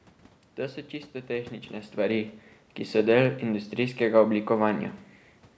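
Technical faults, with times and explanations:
No technical faults detected.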